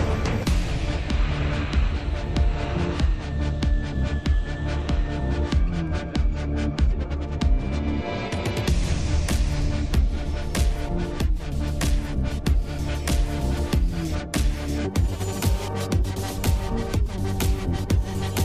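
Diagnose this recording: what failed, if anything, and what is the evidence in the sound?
From 14.85 s to the end of the clip at 18.44 s there is a section at the wrong speed. The sound runs 1.31 times fast and rises by about five semitones, with tempo and pitch jumping together at one instant. The likely cause is an editing or playback stage clocking that stretch at the wrong rate. On a spectrogram every harmonic band steps up by the same ratio at 14.85 s, and on the waveform the cycles and envelopes compress in time.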